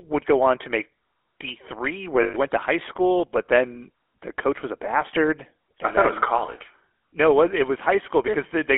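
Speech, carried throughout by the GSM full-rate codec: the audio is confined to roughly 300 Hz to 3.4 kHz, with a plainly audible buzzy, gravelly roughness consistent with 13 kbps full-rate coding. From 2.22 to 2.36 s, lost GSM frames leave a 120 ms rough, metallic ring as the last good frame is repeated, which fits about six dropped 20 ms frames.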